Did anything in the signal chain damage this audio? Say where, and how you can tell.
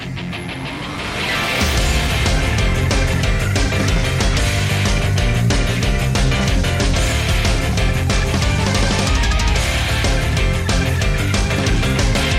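No, nothing in the signal chain damaged this audio.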